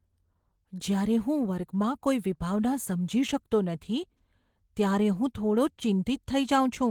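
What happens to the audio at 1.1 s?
At 1.1 s the speech carries Opus voice compression, present across the whole clip. The low bitrate, around 16 kbps, gives the linear-prediction layer below 8 kHz and the coarse layer above it too few bits, so it sounds hoarse and slightly robotic. A spectrogram shows patchy, smeared content above 8 kHz, reaching about 20.2 kHz.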